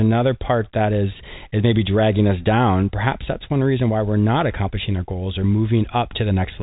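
Nothing stands out as a fault in the speech; all you hear is the usual telephone-band character of G.711 A-law coding, which stops at 4 kHz and leaves at most a faint quantisation hiss riding about 38 dB under the voice.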